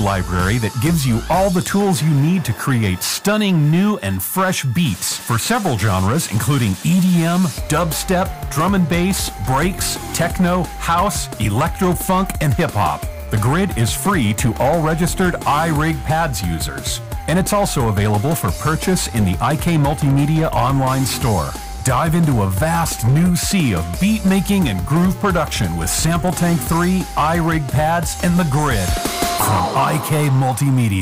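A stage in the chain is being driven about 9 dB past what it can pass, so its peaks are cut flat throughout the 31 seconds: hard clipping on around 7 percent of samples, which adds high harmonics heard as harsh fuzz on every loud sound.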